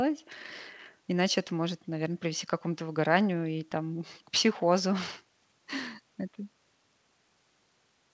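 No technical faults turn up in this speech, which comes through a call path whose content stops at 8 kHz, consistent with a G.722 codec at 64 kbps.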